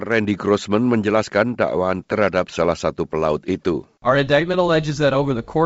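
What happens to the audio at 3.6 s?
At 3.6 s the speech carries on intact, with no dropout, click or distortion, just the wideband telephone sound of G.722 coding with its clear band up to about 7 kHz.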